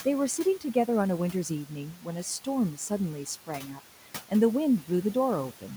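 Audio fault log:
Throughout: noise suppressor artifacts. The room noise, about 17 dB below speech, is pulled down by about 11 dB between words and rises under them, so the spectrogram's noise floor pumps with the speech.
1.93–2.07 s and 3.47–3.8 s: speech cut by the noise suppressor. Quiet speech taken for noise is turned down by about 11 dB and about 9 dB, and sounds swallowed. These appear as brief waveform dips and faded spectrogram energy.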